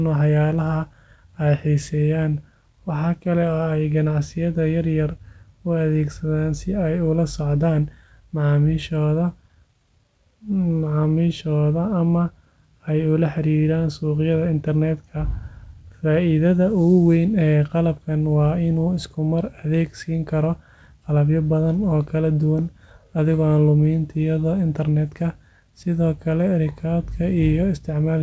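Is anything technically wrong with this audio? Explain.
No, nothing stood out on listening to this speech, which comes through a call path whose G.722 coding leaves nothing above 8 kHz.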